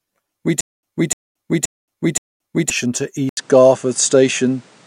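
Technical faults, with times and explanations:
0.61 to 2.70 s, stutter with silent gaps: a fragment of speech about 299 ms long plays four times, each followed by roughly 224 ms of digital silence, so the same burst returns every 524 ms at a mechanical, even pace. This is likely a playback or stream stall in which each retry replays the last buffered fragment and then runs dry. The speech that belonged in that span never arrives.
3.29 s to the end, input switched to a poorer device: after a silence of about 80 ms, the speech comes back with nothing above 10.5 kHz, so it sounds duller and boxier, with a new background noise floor at about 35 dB below the speech. The loudness stays about the same, which is why the shift is heard as a change of tone rather than level. The likely cause is the system switching mid-recording to another microphone or a headset's call profile.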